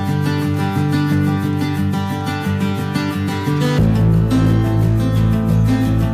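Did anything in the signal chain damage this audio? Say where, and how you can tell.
Yes. Hard clipping runs through the whole clip. The signal drives about 9 dB past what the converter or a gain stage can pass. Roughly one sample in twenty is cut flat. Those squared peaks add high harmonics, heard as harsh fuzz on every loud moment.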